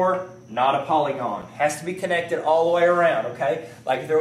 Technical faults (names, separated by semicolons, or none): gap between stream segments